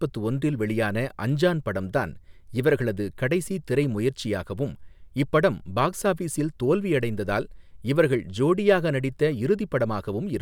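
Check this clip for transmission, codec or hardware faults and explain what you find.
No faults found.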